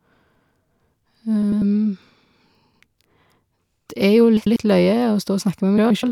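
Frames out of order garble the speech at 1.43, 2.67, 4.37 and 5.78 s. Neighbouring 64 to 128 ms blocks swap places, giving a garbled flutter.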